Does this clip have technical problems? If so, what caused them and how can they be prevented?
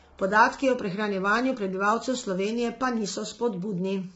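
Yes. The speech was likely sent through low-delay AAC compression (AAC-ELD) at a bitrate that fits about 16 kbps. At this low bitrate, throughout the clip the voice sounds rough and grainy, with noise between harmonics and nothing above 7.8 kHz. A higher bitrate, or a longer-frame codec where low delay isn't essential, would prevent it.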